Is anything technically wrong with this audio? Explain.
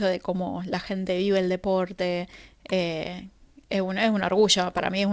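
No, nothing is technically wrong with this audio; it has passed through a wideband call path, which fits a G.722 codec at 64 kbps, and the lack of content above 8 kHz is that codec's normal bandwidth limit.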